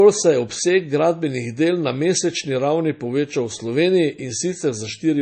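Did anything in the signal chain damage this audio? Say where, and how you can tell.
Yes, codec stage: MP3 compression, likely, throughout. The speech is watery and swirly with nothing above 8.3 kHz, which fits a starved encoder around 32 kbps.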